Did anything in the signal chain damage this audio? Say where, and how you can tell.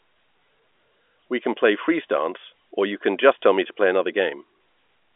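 No, nothing in the chain damaged this speech; it simply carries the narrow band of a G.711 A-law telephone line, with energy confined to roughly 300 Hz to 3.5 kHz and nothing above about 3.7 kHz.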